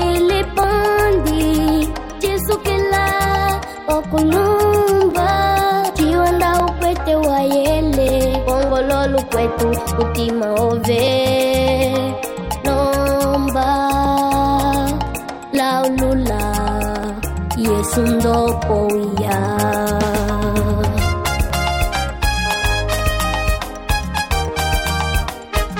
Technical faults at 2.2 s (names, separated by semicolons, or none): clock drift buffer slips